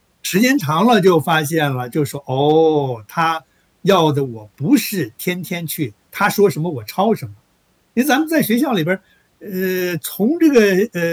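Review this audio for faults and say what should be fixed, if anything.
Hard clipping occurs in five places in the speech: 0.45 to 1.65 s (about 3 dB over), 2.45 to 2.58 s (about 1 dB), 3.89 to 4.00 s (about 4 dB), 6.22 to 6.44 s (about 4 dB), and 10.46 to 10.64 s (about 6 dB). In each, the peaks exceed what the signal chain can pass and are sliced flat, adding high harmonics heard as crackle, harshest at 10.46 s. Lower the input or recording gain by at least 6 dB, or add a limiter before the converter.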